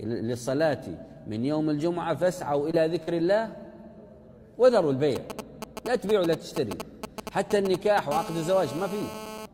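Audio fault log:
2.71–2.75 s and 3.03–3.09 s, short concealed packet loss: about 20 ms and then about 40 ms of audio arrived too late for the decoder. The receiver patched each hole by extending the preceding sound and blending back in, leaving two brief smears or wobbles.
5.16–8.00 s, GSM signalling bursts: a nearby 2G phone exchanging signalling sends short groups of radio bursts at a 216.7 Hz rate, which the audio circuitry rectifies. The result is a galloping dit-dit-dit of short buzzes, only a few dB below the wanted sound.
8.12–9.46 s, GSM phone buzz: the nearby phone is now in a call and transmits in bursts, 216.7 times per second. Rectified by the audio circuitry, this becomes a steady, hard, raspy 217 Hz buzz full of harmonics, about 11 dB below the signal.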